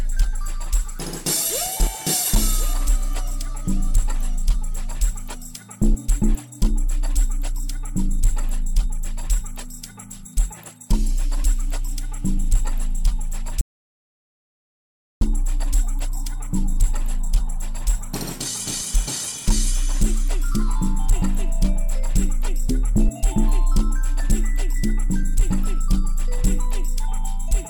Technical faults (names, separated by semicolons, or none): audio dropout to silence